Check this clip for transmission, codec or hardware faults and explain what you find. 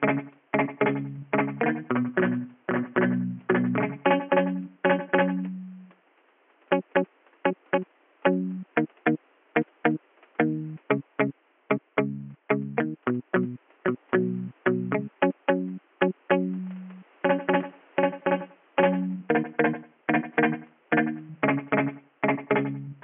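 No faults can be heard.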